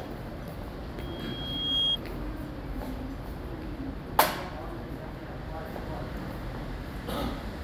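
At 0.98 s a loudspeaker feedback squeal begins and runs to 1.98 s. A single tone at 3.3 kHz rises out of the sound, swelling over roughly three quarters of a second until it sits around 10 dB above the program material. The microphone is picking up the loudspeaker it drives, and at 3.3 kHz the loop gain has gone past unity, so that frequency keeps reinforcing itself until the loop is broken.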